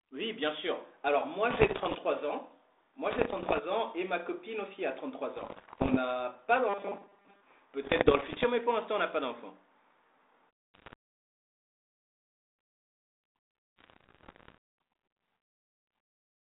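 Bit errors on the ADPCM link upset the decoder's step size and predictor, so each burst rings on as pops and rough, level-jumping crackle at 1.5–1.97 s, 3.11–3.62 s and 5.37–5.97 s. At 6.69–7.42 s, the playback repeats short buffers, likely because new audio arrives too seldom, forcing a rigid, metallic 200 Hz buzz that fits a 5 ms buffer. The same bit-error bursts return at 7.82–8.45 s, 10.74–10.93 s and 13.78–14.58 s, all within the narrow 300 Hz to 3.7 kHz band of the G.726 line.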